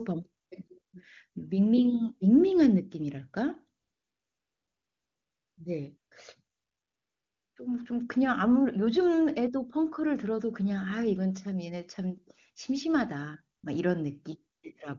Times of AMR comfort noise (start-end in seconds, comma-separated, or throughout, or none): 0.43-0.93, 3.81-5.57, 5.97-6.11, 6.55-7.55, 13.57-13.63, 14.55-14.63